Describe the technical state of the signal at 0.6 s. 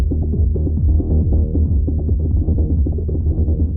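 At 0.6 s the signal is intact, with no dropout, distortion or other fault audible at that point.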